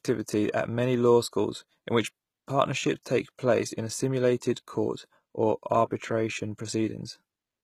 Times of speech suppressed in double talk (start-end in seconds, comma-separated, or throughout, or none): none